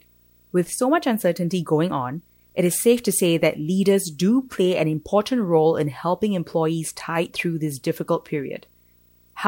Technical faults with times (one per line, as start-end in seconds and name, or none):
0.00-9.48 video or display buzz